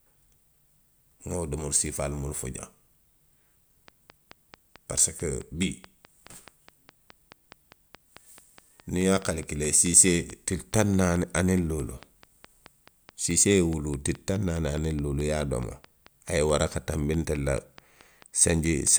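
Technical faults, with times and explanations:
3.88–18.88 s, train of clicks: a steady ticking, about 4.7 clicks a second at an even pace, all much the same shape, roughly 70 in total and peaking around 5 dB above the speech, audible in the pauses too. Likely interference or a faulty connection injecting pulses.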